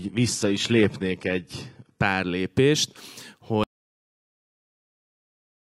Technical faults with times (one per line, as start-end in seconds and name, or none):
0.00-2.00 adaptive stream starting at a low bitrate
3.63-5.67 audio dropout to silence